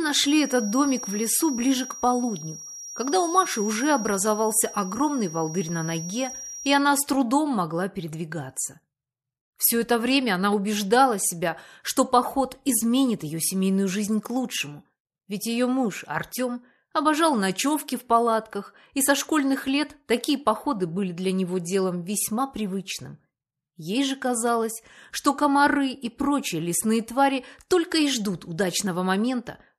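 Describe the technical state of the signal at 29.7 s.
At 29.7 s the signal is intact, with no audible dropout, clipping, distortion or other technical fault at that moment.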